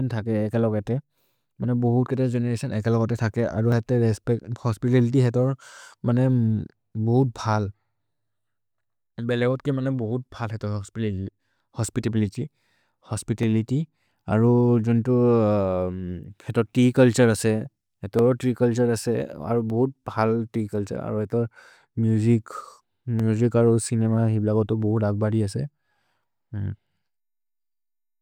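A speech clip with five sharp single clicks, at 3.72, 13.43, 18.19, 19.70 and 23.20 s. Each is a thin vertical line across the spectrum. These are likely dropped samples. Well under a millisecond goes missing, so the waveform jumps abruptly. No sound is lost.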